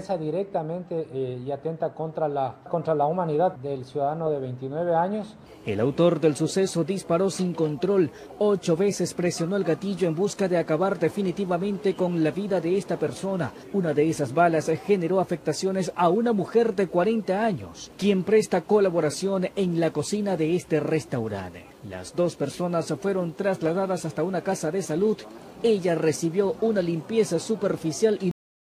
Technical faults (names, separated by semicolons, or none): cut-off end